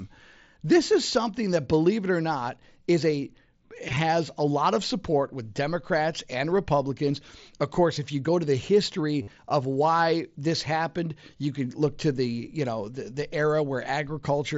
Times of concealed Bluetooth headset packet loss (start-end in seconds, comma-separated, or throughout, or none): 3.89-3.97, 9.22-9.30